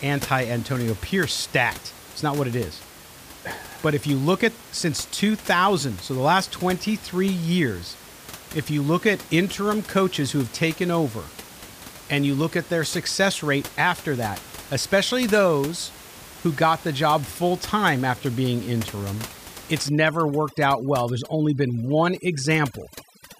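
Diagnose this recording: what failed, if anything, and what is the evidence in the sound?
Overdone noise removal in call processing from 19.89 s, just past "after being interim it's", cuts noise-level bands, leaving a lowered, twinkling background.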